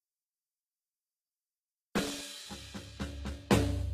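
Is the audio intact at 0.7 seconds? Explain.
No. At 0.7 seconds, as across the whole clip, the music's treble sounds synthetic, with a plainly audible gritty, metallic edge and nothing at all above 14.9 kHz. This is likely HE-AAC compression, at a level that fits a bitrate around 20 kbps. The codec stores only the lower spectrum and regenerates the top by copying lower bands upward under a coarse envelope, so the rebuilt harmonics fail to line up with the real ones.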